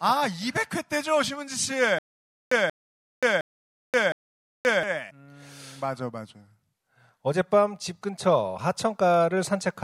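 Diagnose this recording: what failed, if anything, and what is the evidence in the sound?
Stutter with silent gaps from 1.99 to 4.83 s: the same 183 ms burst repeats four times, every 712 ms, with 529 ms of digital silence between. A stalled playback or stream buffer is the likely cause. Unlike random dropouts, the repeats are identical and evenly paced.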